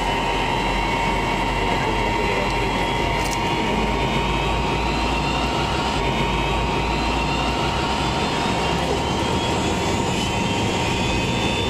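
Stream segment repeated at 5.95 to 7.99 s: the player queued the same segment twice, so about 2.04 s of audio replays after a small blip at the jump back.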